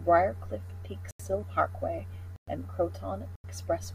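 At 1.11 s, 2.36 s and 3.36 s the speech drops into blocks of digital silence lasting about 85 ms, 113 ms and 85 ms. Each time, the output buffer likely went unfilled and zeros took its place. The cut is abrupt, with a short dead hole between. The two 85 ms gaps fit a 4096-sample block. Unlike a fade or a concealed dropout, there is no taper and no smeared fill, only true silence.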